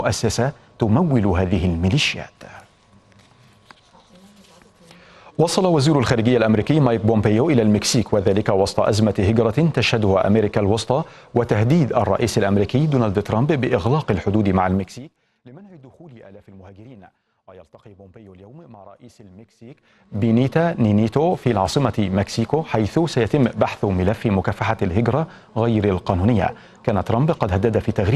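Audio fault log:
14.72 to 15.12 s and 19.60 to 20.29 s, zipper noise: a fast ticking, almost a buzz, rides on the sound as the level first drops by roughly 25 dB and later climbs back by about the same amount. The gain moves in unsmoothed jumps of about 2 dB going down and about 1 dB coming up, at around forty steps a second. Each abrupt jump puts a small click into the waveform, and the clicks run together into that zipping texture.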